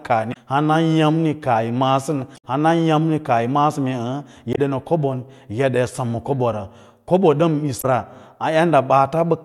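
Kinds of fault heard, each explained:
Damaged data in a compressed stream: the speech breaks four times into short glitches, at 0.30, 2.34, 4.52 and 7.78 s, each lasting about 60 ms except the one at 2.34 s, which runs nearly 0.1 s. At each point the encoded data was corrupted, so the decoder misread those frames, lost its place in the stream and resynchronised on a later frame header, producing garbled sound before normal decoding resumes.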